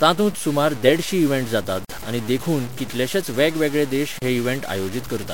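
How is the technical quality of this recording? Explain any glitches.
The recording has clear technical problems: a gritty distortion runs through all of the speech, and two brief dropouts break it partway through.

Low bit depth without dither, throughout: the speech sounds grainy, with a distortion that shifts with the voice, sitting only about 20 dB below it, and the quietest stretches break up or sputter. The cause is likely a signal reduced to very few levels and truncated without dither, which fits roughly a 6-bit word. Without dither the rounding error tracks the waveform, so it is heard as distortion that follows the sound rather than as steady hiss.

Gap at a join of encoded pieces, at 1.85 to 1.89 s (48 ms, right after "देडशीं इवेंट जातात") and at 4.19 to 4.22 s (34 ms, right after "कितलेशेच वेगवेगळे देश"): the speech stops dead for a moment and then picks up where it left off. 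The clip was encoded in separate pieces and joined without trimming, so each piece's start-up delay and end padding remain as silence. The codec smears the edges, so the silent part is shorter than the gap itself.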